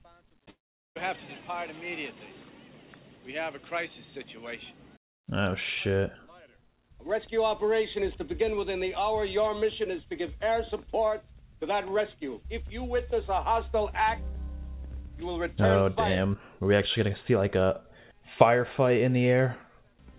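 From 0.5 to 0.97 s the sound fades into a buzz, then silence; a long network dropout is the likely cause, far longer than a single lost-packet glitch.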